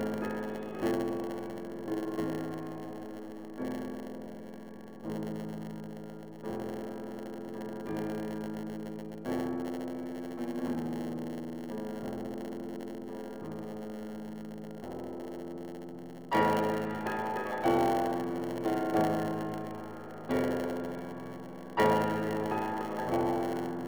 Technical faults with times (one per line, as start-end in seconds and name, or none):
0.00-23.88 block size mismatch (padded)